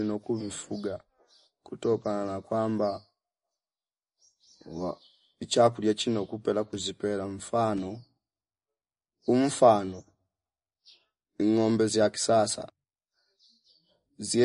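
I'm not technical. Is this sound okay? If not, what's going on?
No, there's a fault that runs from start to finish. The speech sounds dull and watery, as if heard through a thin wall, and the crisp edges of s and t sounds come out smeared or swirly. Nothing above about 10.6 kHz survives, so the top sparkle is simply gone. The likely cause is MP3 compression at a low-quality setting: to save space, the encoder discarded the treble and thinned out quieter detail, which leaves these audible traces.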